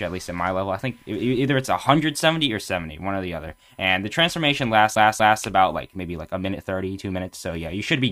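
Right from the start there's a steady USB whine sitting at 1 kHz, roughly 40 dB under the audio. That's the bus's 1 ms frame timing bleeding into the power or ground, so you get a fixed, thin tone that never moves in pitch.

Then at 4.95 s the CD gets stuck on one turn until about 5.43 s. A scratch keeps knocking the laser back a track, so the same 0.24 s chunk plays twice, with a short mute at each jump. That gives you that quick, even skipping-disc stutter.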